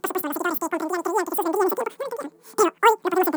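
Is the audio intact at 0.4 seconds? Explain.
No. At 0.4 s, as across the whole clip, the speech is affected by a wrong sample rate: the samples are being clocked out much faster than they were captured, with no rate conversion. Everything runs about 2.76 times too fast and sits roughly 17.6 semitones higher, so the voice sounds squeaky and rushed. That ratio fits material recorded at 16 kHz being played back at 44.1 kHz.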